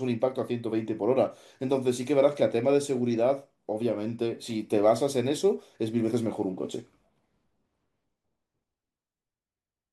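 No technical faults can be heard anywhere in the speech recording.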